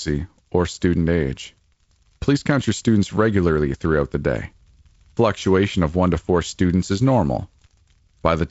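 Nothing stood out on listening; the speech comes across through G.722 wideband telephone coding at 48 kbit/s, with no content above about 7.7 kHz.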